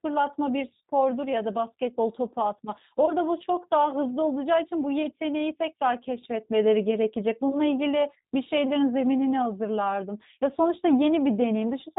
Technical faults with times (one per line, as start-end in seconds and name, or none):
0.00-11.98 G.729 codec
3.06-3.12 VoIP packet loss concealed by the speech codec